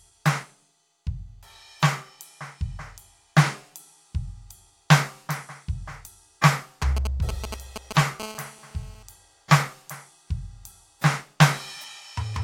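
A piece of music picks up a nearby 2G handset here. From 6.82 to 8.01 s there are GSM signalling bursts: a galloping dit-dit-dit of short raspy buzzes at about 217 Hz, nearly as loud as the music, as the phone's brief radio bursts get rectified in the audio circuitry. Then from 8.20 to 9.03 s it settles into a steady GSM phone buzz at 217 Hz, about 17 dB below the music, harsh and full of harmonics, the pattern of a phone holding a call and pulsing continuously.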